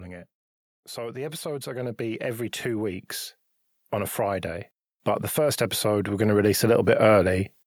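From 0.94 to 3.13 s the level of the speech and the room noise behind it swells together, climbing about 8 dB over roughly two seconds; after "but the", from 5.35 to 7.4 s, the same slow lift returns, about 7 dB. Both are automatic gain rising: the gain control judged the input too quiet and ramped its amplification upward, boosting everything it received rather than the voice alone.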